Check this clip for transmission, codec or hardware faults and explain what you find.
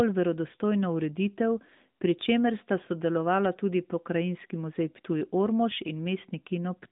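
No faults found: the speech sits within a narrowband mobile-codec channel of roughly 150 Hz to 3.7 kHz with nothing above 3.8 kHz, consistent with AMR-NB at 12.2 kbps, and nothing in it points to a transmission, codec or hardware problem.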